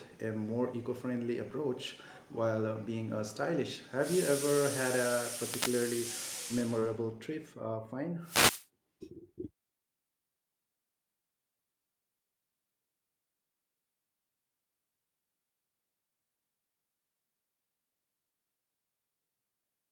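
At 5.44 to 5.74 s and again at 8.22 to 8.67 s, a wireless microphone noise hit: the FM signal fades and receiver hiss rises, showing as broadband static smearing across the spectrogram.

Around 6.79 to 6.85 s, a short concealed packet loss: about 20 ms never arrived and was filled by extending the preceding sound. It is heard as a brief smear.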